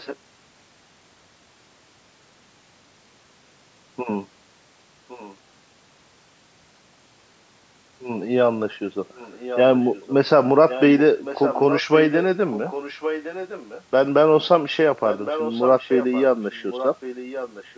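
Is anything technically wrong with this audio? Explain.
Yes, there is an echo leak. At 0–0.17 s, 5.08–5.36 s, 9.13–10.13 s, 10.69–13.83 s and 15.06 s to the end, a copy of the speech trails it by 1.11 s. It is quietest at 5.08 s and strongest in the last two stretches, at roughly 10 dB below the speech. The likely cause is a far-end loudspeaker whose echo canceller let part of the microphone pickup return down the line. On a spectrogram, the same harmonic patterns reappear 1.11 s later at lower intensity.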